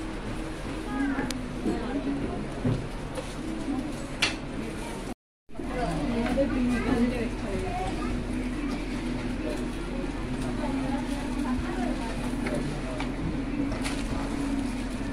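From 1.19 s to 14.39 s a click recurs every 1.32 s, about ten in all, each a brief discontinuity where a short run of samples, roughly fifteen, is skipped or doubled. The likely cause is clock drift buffer slips: two devices running on separate clocks that disagree by a few hundred parts per million, so the buffer between them periodically overflows or runs dry. The strict regularity of the clicks separates this from random dropouts or packet loss.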